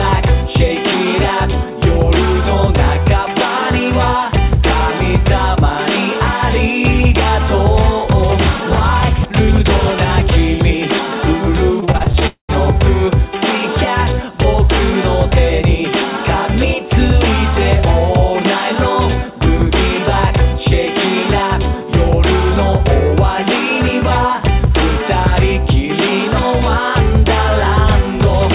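Between 11.8 and 12.23 s the audio turns choppy and robotic: repeated packet loss leaves a string of short holes, the longest about 22 ms. Each is patched by extending the preceding sound, so roughly 30% of that stretch is filled-in material. This rapid stutter is what separates it from a single long gap. Immediately after, from 12.27 to 12.5 s, the sound is stretched into a fading buzz or hiss that dies into about 110 ms of silence, and it resumes with around 220 ms simply absent. One sustained break rather than many tiny ones points to a likely long network dropout. Throughout, nothing is present above 4 kHz, consistent with a G.711 mu-law call path at 64 kbps.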